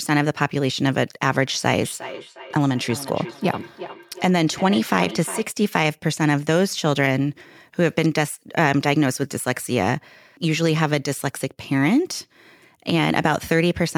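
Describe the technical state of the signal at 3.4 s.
At 3.4 s the speech is shadowed by a thin, ringing copy of itself that returns at a steady interval of roughly 0.4 s, peaking at about 14 dB below the direct speech. This is feedback echo between two devices, running from 1.81 s to 5.5 s. A second device in the same room plays back what the first microphone sent, and that microphone picks it up again. Each echo canceller removes only its own device's playback, so the loop goes uncancelled.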